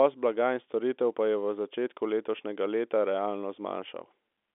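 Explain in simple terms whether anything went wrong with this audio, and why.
Nothing went wrong here; the speech just has the slightly boxed-in sound of an ordinary telephone line, which carries nothing above about 3.8 kHz.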